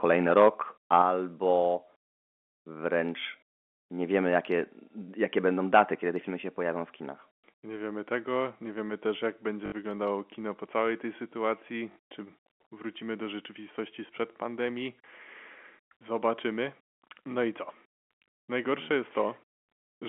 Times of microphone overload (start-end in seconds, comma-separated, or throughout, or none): 0.36-0.49, 0.93-1.02, 5.74-5.81